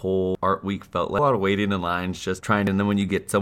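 In this speech clip the audio jumps forward three times: at 0.35 s, just before "art week felt"; at 1.19 s, between "art week felt" and "lot of"; and at 2.67 s. Each time a stretch of speech is simply missing. These are compressed frames skipped. Whole frames of about 92.9 ms each were never played, either missing from the file or rejected by the decoder as damaged. That is about five frames, roughly half a second, at the first two points, and about three frames, roughly 0.3 s, at the last.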